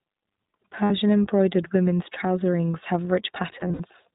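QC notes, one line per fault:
Throughout: iLBC codec. The audio is band-limited with nothing above 4 kHz, and the speech has a plainly audible rough, slightly synthetic texture. The codec rebuilds each short frame's excitation independently rather than carrying detail from the previous one, which leaves this coarseness. The 20 ms framing fits iLBC's 15.2 kbps mode.
0.84–0.91 s and 3.60–3.81 s: lost iLBC frames. The first gap lasts 60 ms and sounds like a held, faintly buzzy vowel. The decoder repeats the last pitch cycle with added noise, and the gap's length fits about three missing 20 ms frames. The second disturbance totals 120 ms of loss spread over 200 ms, with the longest stretch about 70 ms. Because each frame decodes independently, the speech recovers almost immediately after each gap.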